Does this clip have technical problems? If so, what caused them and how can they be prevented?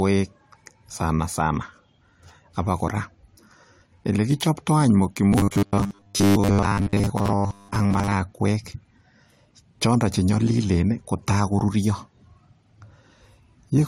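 Yes. Throughout the clip the speech has a blend of two kinds of compression damage: a smeared, swirly texture alongside a dull top end with nothing above about 16.5 kHz. This is likely transcoding between lossy codecs. The sound appears to have been encoded to MP3 and then re-encoded to AAC-LC, both at rates that sound like around 64 kbit/s. The second encoder wasted bits reproducing the first encoder's artefacts and added its own, and the earlier cut-off remained. To prevent this, keep a lossless master and encode only once, from that master.

From 5.29 to 8.13 s the voice becomes a rigid, metallic buzz fixed at 100 Hz, though it still loosely follows the speech. This is robotic sound from repeated short buffers, likely caused by audio arriving too slowly to the playback stage. The software fills the gaps by repeating the last 10 ms of audio, which fits the 100 Hz pitch, and most of the real audio in that stretch is lost. 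To prevent this, use larger playback buffers or more reliable delivery so the buffer never runs dry.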